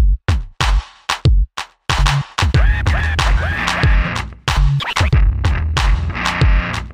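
Nothing stood out on listening to this audio.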